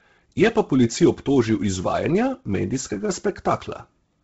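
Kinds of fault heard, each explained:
Bluetooth LC3 compression: The speech has a breathy, grainy edge throughout. Its upper range sounds hissy and smeared rather than crisp, and nothing reaches above 7.8 kHz. The likely cause is the Bluetooth LE Audio transform codec running short of data. It discards much of the upper spectrum and fills those gaps with shaped noise. Damage this heavy fits a rate around 16 kbps with 10 ms frames.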